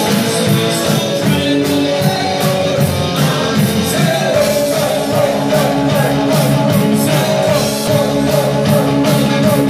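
At 7.87 s, damaged data in the compressed stream garbles a frame. The decoder loses sync and resyncs at the next frame header, unlike the clean silence of a dropout.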